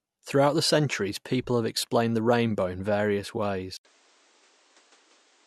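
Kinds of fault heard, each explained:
Input switched to a poorer device: at 3.77 s, just after "the rainbow in various", the speech drops out for 80 ms and returns through a different path to the end of the clip. Nothing reaches above 9.4 kHz from there on, so the top of the sound is missing. The level moves by around 5 dB. A new background noise appears, about 40 dB below the speech. The likely cause is a change of input to another microphone or a headset's call profile.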